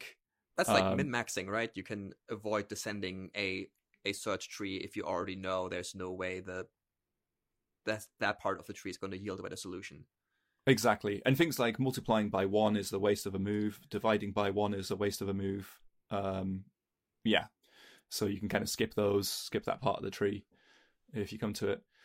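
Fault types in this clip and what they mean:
No fault types are present in this clip.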